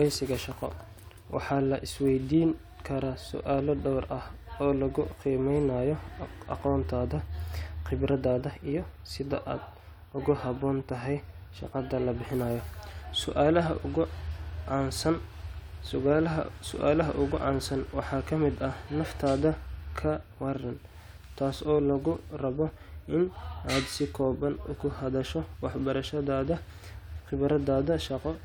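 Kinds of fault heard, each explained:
No kinds of fault are heard in this clip.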